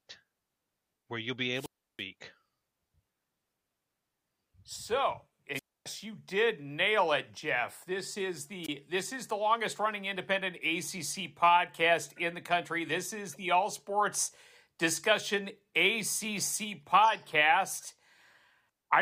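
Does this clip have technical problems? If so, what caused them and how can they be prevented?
Yes, wireless microphone squelch dropout cuts the speech three times. After "where you'll be" the sound mutes from 1.54 to 2.03 s, with about 331 ms of near silence. It drops again from 5.53 to 5.86 s (about 267 ms muted) just before "you did nail it", and a short gap of about 22 ms at 8.63 to 8.69 s comes just before "this is the longest". Each time the radio link from the analogue FM transmitter weakened, hiss rose briefly, and the receiver's squelch shut the output until the signal recovered. On a waveform these show as flat, empty holes. On a spectrogram they are blank vertical bands across all frequencies, edged by broadband noise. Keeping the transmitter in clear line of sight, fitting fresh batteries, placing the antennas well and choosing a clean frequency would prevent it.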